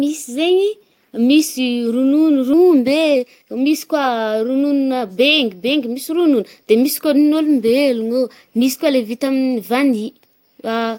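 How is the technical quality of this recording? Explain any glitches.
The recording has two related timing faults early on.

At 2.53 to 2.55 s there is a skip ahead. A stretch of audio, roughly 0.7 s, was dropped while later audio was already queued, and what remained was joined with no filler. The speech jumps forward almost seamlessly: a chunk of the talk simply vanishes, and the two sides of the cut butt together, so the listener hears an abrupt leap rather than a pause.

From 2.63 to 5.42 s comes a jitter buffer speed-up. Having held more audio than its target, the buffer worked the delay down by repeatedly cutting out tiny slices, each one or a few pitch periods long, removing roughly 0.3 s in total. The speech plays about 12% faster while keeping its normal pitch, so this passage sounds hurried.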